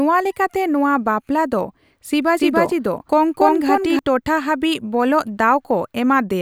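From 2.37 to 3.99 s the speech carries a doubled audio track: a second copy at about equal level trails roughly a third of a second behind, likely from a parallel capture path.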